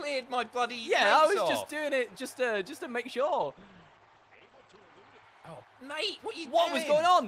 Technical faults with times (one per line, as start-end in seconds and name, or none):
3.21-6.55 call bitrate drop